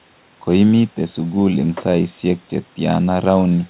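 Speech heard through a WebRTC call path, with nothing above 4 kHz in a way that points to a G.711 A-law call codec, and no technical faults can be heard anywhere in the recording.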